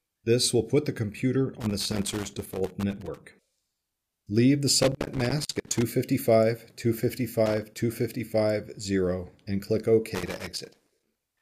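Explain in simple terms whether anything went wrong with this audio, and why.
Loose connector crackle: a dirty or worn plug keeps cutting the signal in and out, giving scratchy bursts at 1.6–3.18, 4.82–5.83, 7.46–7.77 and 10.15–11.41 s.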